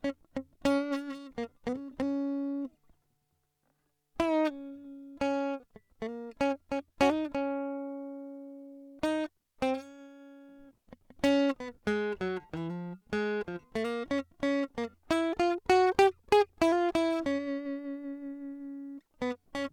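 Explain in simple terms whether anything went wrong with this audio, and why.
Clock drift between sender and receiver runs through the whole music clip. The sending device's clock ticks about 5 percent faster than the receiving device's, so sound arrives slightly quicker than it can be played out. The waiting area that smooths delivery, the jitter buffer, keeps overfilling. Left alone it would grow steadily longer, so the receiver has to keep throwing small bits away to hold its place.

Repeated timing corrections happen from 0.02 s to 19.64 s, almost the entire clip. To keep up with a sender running at 105 percent speed, the receiver keeps trimming out short slivers of the music, always cutting rather than repeating, at uneven spacing. Each cut is tiny, so it comes across as faint hiccups or a slightly unsteady, rushed tempo rather than obvious gaps.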